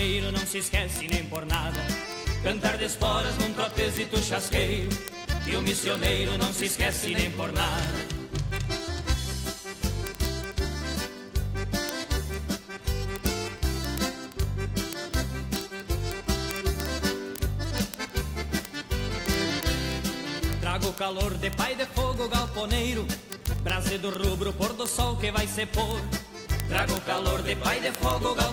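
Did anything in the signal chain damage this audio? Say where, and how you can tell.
Yes: steady ticks about every 30 ms, 0.12–28.50 s, are word clock ticks: an unlocked digital-link receiver slipping one sample as clocks drift roughly 700 ppm.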